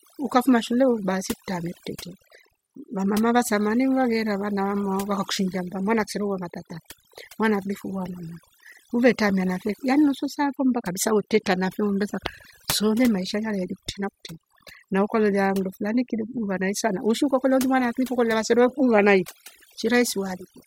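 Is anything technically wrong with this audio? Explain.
Yes. Overdone noise removal runs throughout the speech: heavy-handed suppression gates bands near the noise floor, leaving twinkling specks in silence and a speckled, holey spectrogram.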